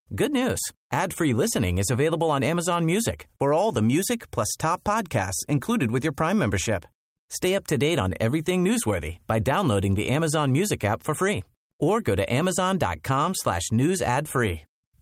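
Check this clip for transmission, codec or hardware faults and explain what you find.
Nothing stood out on listening to this speech clip.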